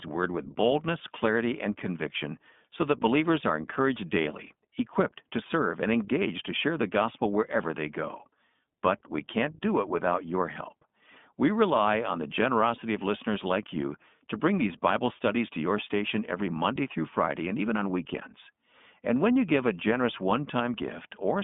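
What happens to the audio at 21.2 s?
At 21.2 s the iLBC codec is still at work, as it is across the whole speech clip. The line is cut to roughly 200 Hz to 3.5 kHz, and each 20 ms frame is coded on its own, which fits a 15.2 kbps mode. The speech sounds plainly rough and slightly synthetic. Plain band-limiting would sound dull but smooth. The grainy, buzzy texture points instead to frame-by-frame excitation coding.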